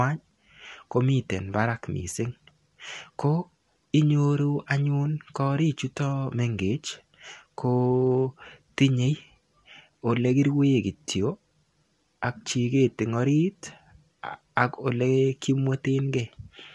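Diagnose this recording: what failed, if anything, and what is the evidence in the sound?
The codec stage is the culprit here, and it runs the whole way through. The speech sounds rough and grainy, with a noisy haze filling the gaps between the voice's harmonics, and nothing at all comes through above about 11.7 kHz. That mix is likely low-delay AAC compression, the AAC-ELD kind used on video calls: its short frames can't pin down pitch harmonics cleanly. The damage is plainly audible, which fits a bitrate of around 32 kbps.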